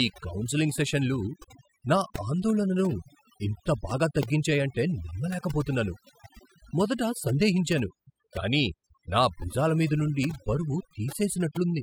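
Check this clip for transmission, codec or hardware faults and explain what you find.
One fault runs through the whole speech clip: overdone noise removal. A too-strong noise reducer mutes bands near its noise estimate, so pauses turn near-silent with twinkling specks. A spectrogram shows blank gaps with scattered isolated dots.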